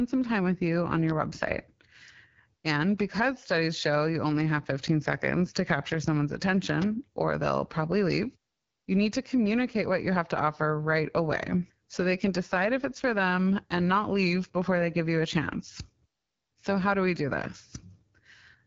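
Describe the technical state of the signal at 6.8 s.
A sharp, dry snap lands at 6.82 s, right after "seconds to capture someone's" and before "or they'll probably leave". This is an electrical switching spike, a brief arc from a nearby switch, motor or static discharge that was likely picked up by the audio line and added on top of the speech.

Underneath, the speech has a plainly rough, raspy texture and nothing above about 7.1 kHz. That is AMR wideband (HD Voice) codec damage. The speech model at a low rate, which fits the 8.85 kbit/s mode, leaves a buzzy grain, and the top band is filled with shaped noise.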